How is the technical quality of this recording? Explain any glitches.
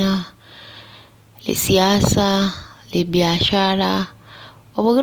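The recording carries audible lossy-codec damage from start to finish, most likely Opus compression. Throughout the speech, tonal parts of the sound turn rough, grainy and noisy. The encoder appears to be in its music (CELT) mode at full bandwidth, reaching up to about 20.4 kHz with nothing above. When bits run short, it keeps each band's energy but fills in missing detail by folding lower bands upward or injecting noise. That produces the graininess rather than swirling holes, consistent with a bitrate around 24 kbps.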